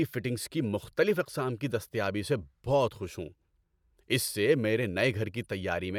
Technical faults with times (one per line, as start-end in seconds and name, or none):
none